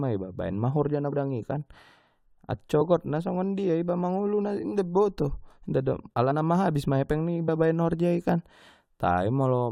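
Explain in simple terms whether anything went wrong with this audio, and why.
Three times the speech briefly jumps forward: at 1.12 s, between "baen ma horja na" and "i kan"; at 6.30 s; and from 7.45 to 7.50 s, between "ma epeng" and "baen horjai kan". These are compressed frames skipped. Small chunks of the compressed file were missing or rejected as damaged, so playback leapt ahead by roughly a tenth of a second at the first spot and a few hundredths at the others.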